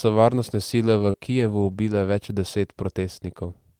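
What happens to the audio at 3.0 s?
Nothing goes wrong at 3.0 s; the speech carries on intact through that moment, with no dropout, click or distortion to be heard.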